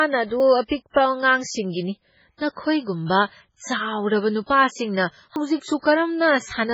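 Throughout, the speech sounds watery and swirly, with weak detail flickering in and out. This is heavy MP3 compression, most likely at a very low bitrate near 16 kbps. A plain low-pass filter would also dull the treble, but it would not leave these shifting, chirpy artefacts.

At 0.4 s, and again at 5.36 s just after "ꯅꯈꯣꯏꯒꯨꯝꯕ ꯆꯥꯎꯔꯕ ꯅꯨꯄꯥꯁꯤꯡꯅ", the sound makes an abrupt jump ahead, as if about a tenth of a second were cut out. This is likely a dropped buffer (overrun), where unread samples were overwritten. Unlike a dropout, no gap of silence is left.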